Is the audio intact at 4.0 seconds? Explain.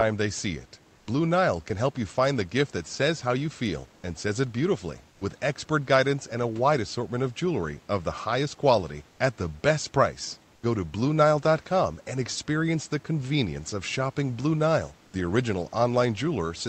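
No. Between 4.01 and 4.03 s there is an onset clipped by the voice detector: the sound begins abruptly, missing roughly its first 20 ms of soft attack. The likely cause is Opus DTX reacting late, with comfort noise filling that gap.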